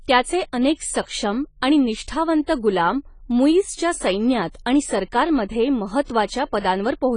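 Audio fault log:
Throughout, AAC compression: the speech was likely passed through a low-bitrate AAC-LC encoder, in line with a 24 kbps stream. It quantised the spectrum coarsely and removed everything above 10 kHz, so the top end is gone and codec damage is plainly audible.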